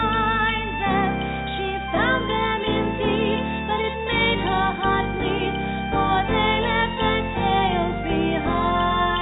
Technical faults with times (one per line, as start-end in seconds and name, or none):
none